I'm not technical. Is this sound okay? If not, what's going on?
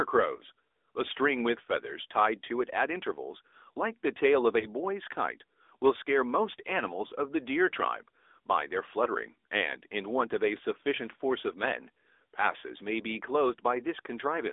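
No. The AMR narrowband mobile codec, an old phone-call format, runs through the whole speech clip. It keeps only roughly 300 Hz to 3.6 kHz and rebuilds the voice from a simplified model, so it sounds muffled, buzzy and somewhat artificial.

Lost AMR speech frames cause brief dips or warbles at 0.36–0.40, 4.60–4.66, 7.08–7.12 and 9.04–9.08 seconds. Each is about 20 ms of missing audio, which fits one lost frame. The receiving phone papers over it by briefly repeating the previous sound more quietly.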